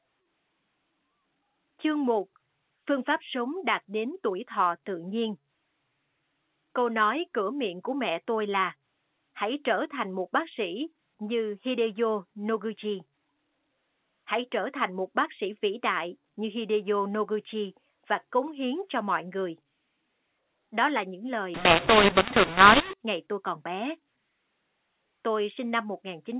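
From 21.54 to 22.93 s, between "là những lời" and "ngày tôi còn bé", the A-law telephone speech is decoded as mu-law. Sample levels scramble, so the sound turns harsh and distorted, and quiet gaps fill with noise. The waveform's envelope jumps, and the spectrogram shows broadband hash below the 4 kHz limit.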